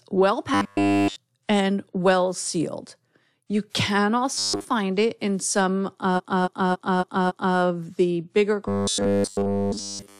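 From 0.54 to 1.16 s the speech collapses into a rigid, metallic buzz at 100 Hz that only loosely tracks the words. This robotic sound from repeated short buffers is likely caused by audio arriving too late, so the playback keeps looping the last fragment, about 10 ms long, in place of the missing audio. The same buzz returns more briefly from 4.35 to 4.65 s, covering most of that stretch, just before "it in some".

After "it in some", from 6.16 to 7.55 s, the audio stutters as one chunk of about 279 ms plays again five more times before "the bigger". These repeated frames, which point to a block of roughly six compressed frames being duplicated, stretch the clip by about 1.39 s.

From 8.68 s, right after "the bigger", to the end at 10.20 s, the 100 Hz robotic buzz takes over completely.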